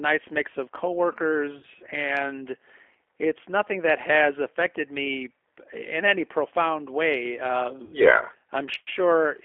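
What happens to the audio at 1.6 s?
From 1.58 to 1.65 s the sound smears into a buzzy tone or coloured noise that fades, then stays weak briefly. This is VoIP packet loss concealed by the speech codec: about 50 ms went missing, consistent with five 10 ms frames, and the decoder extrapolated its last pitch and filter at falling gain.

Through the same moment the audio sounds slightly rough and synthetic within a 300 to 3400 Hz band, the plainly audible signature of the 8 kbit/s G.729 codec.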